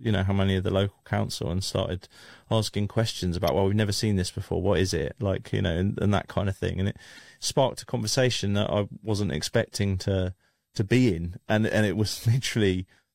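At 3.47 s, between "and started asking questions" and "well we've never seen", and again from 7.16 to 7.19 s, after "of thing and it", damaged data in the compressed stream makes the decoder misread frames and lose sync, producing a brief glitch.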